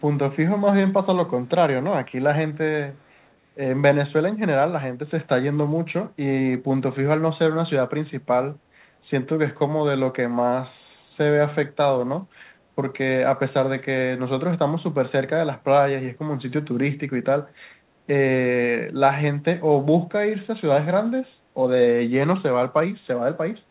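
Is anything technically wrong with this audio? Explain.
Yes, there's a brief echo leak from about 2.93 to 3.3 s. A very faint copy of the speech comes back roughly 286 ms late. That's likely a far-end speakerphone whose echo canceller let some of its own playback slip back into the call. Everything sits below 4 kHz, which fits a G.711 phone codec.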